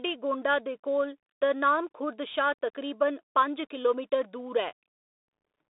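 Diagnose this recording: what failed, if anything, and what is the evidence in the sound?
The codec stage is the culprit here: this speech has gone through a Bluetooth CVSD headset codec for the whole clip. The line sits in a narrow band of roughly 250 Hz to 3.7 kHz, with nothing above 3.8 kHz, and there's a gritty hiss under everything, with s sounds turned scratchy and the loud bright moments breaking up. That fits the one-bit-per-sample 64 kbps scheme, whose adaptive step can't keep pace with fast, loud high content.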